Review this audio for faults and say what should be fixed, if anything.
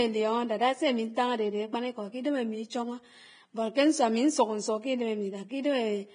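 Throughout the speech, an encoder starved of bits has likely applied heavy Vorbis compression. Nothing survives above 9.7 kHz, and the treble is quantised so coarsely that its detail turns to hiss and grain, roughening tones and blurring attacks, which points to a bitrate around 22 kbps. Encoding at a higher Vorbis quality setting, or delivering from a lossless master, would prevent this damage.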